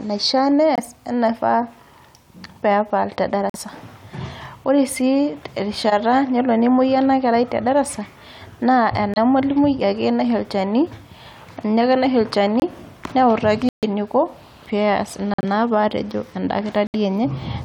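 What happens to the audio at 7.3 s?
Nothing goes wrong at 7.3 s; the speech carries on intact through that moment, with no dropout, click or distortion.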